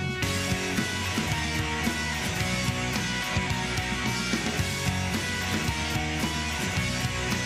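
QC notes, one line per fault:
No faults found.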